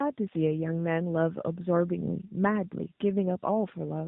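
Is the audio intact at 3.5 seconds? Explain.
No, the speech is rough, muffled and warbly, with nothing above 3.8 kHz throughout. It's tandem speech coding: AMR-NB decoded, passed through G.711, then AMR-NB-encoded again.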